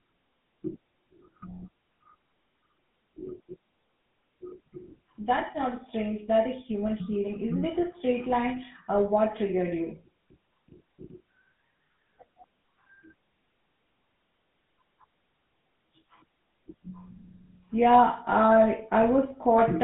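From start to finish the speech has been carried through the GSM full-rate codec, which rebuilds the voice from a vocal-tract model driven by coarsely spaced excitation pulses, the kind of heavy reduction that fits a rate near 13 kbps. The result is a plainly audible buzzy, gravelly roughness in the voice. The line band also narrows the voice to roughly 150 Hz to 3.6 kHz, with nothing above 3.8 kHz, so it sounds thin and muffled.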